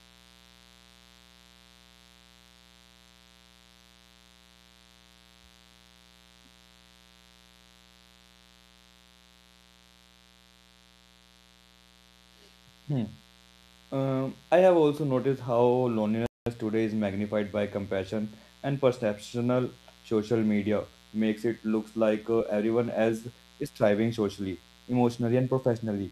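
Mains buzz runs through the whole clip, a steady raspy drone sitting roughly 30 dB below the speech. It is built on 60 Hz, and the rasp comes from the sharp switching spikes that a dimmer, rectifier or poorly shielded cable injects twice per mains cycle. Those spikes spread harmonics of 60 Hz well up into the kilohertz range, so the buzz stays audible under the speech and in every pause.

A playback stall cuts the speech off abruptly at 16.26 s. The output falls silent for about 0.2 s, until 16.46 s, and the sound then resumes with "today is magnified by". The gap is a hard drop to silence in mid-flow rather than a fade. It likely happened because the player ran short of data or its audio thread was briefly blocked, leaving nothing to output until it recovered.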